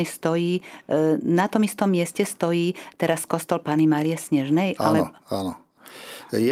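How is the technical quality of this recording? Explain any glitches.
The technical quality of this recording is sound, with no glitches to explain.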